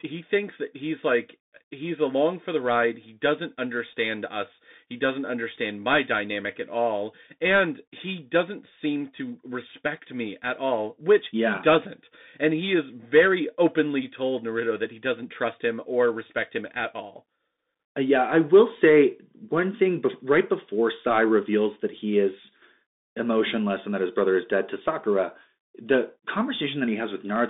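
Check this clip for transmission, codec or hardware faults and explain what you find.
One fault runs through the whole clip: the Bluetooth CVSD headset codec. The speech sits in a band of about 200 Hz to 3.7 kHz, with nothing above 3.7 kHz. The grainy texture fits one-bit up-or-down coding at 64 kHz, whose adaptive step lags on loud high sounds, making s sounds scratchy over a granular hiss. A spectrogram shows a flat ceiling near 3.7 kHz, and the waveform looks fuzzy and stepped.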